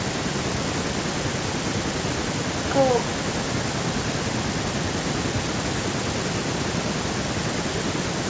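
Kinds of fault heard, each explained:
No faults heard in this clip.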